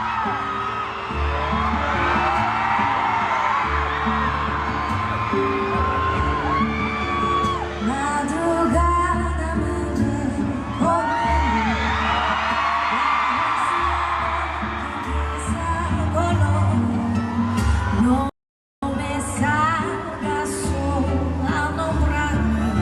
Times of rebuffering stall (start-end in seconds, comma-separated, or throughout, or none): 18.29-18.83